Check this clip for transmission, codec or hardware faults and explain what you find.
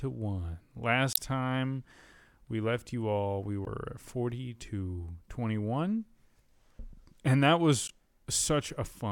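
Damaged data in a compressed stream occurs three times in this speech: 1.12 to 1.18 s, 3.64 to 3.69 s just after "left you all we", and 7.86 to 7.91 s. Corrupted bytes make the decoder misread frames and resync, producing brief glitches.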